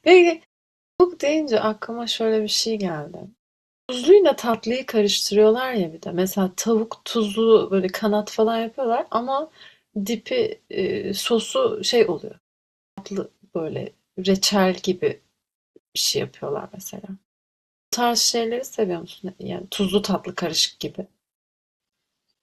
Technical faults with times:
0.80-1.00 clipped start after a pause
3.66-3.89 clipped start after a pause
12.77-12.98 clipped start after a pause
17.71-17.93 clipped start after a pause
19.58-22.42 adaptive stream at a lower bitrate

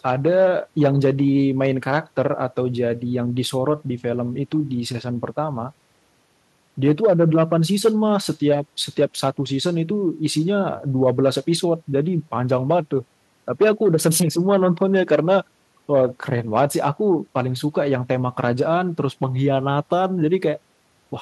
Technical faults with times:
none

